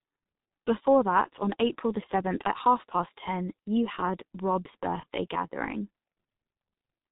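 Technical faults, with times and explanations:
Throughout, G.723.1 codec: coding at 6.3 kbit/s in 30 ms frames strips everything above 4 kHz, so it sounds muffled and hoarse, with consonants badly smeared.
5.00 to 5.05 s, VoIP packet loss concealed by the speech codec: one 30 ms frame went missing, and the decoder stretched its last frame into a brief, fading patch.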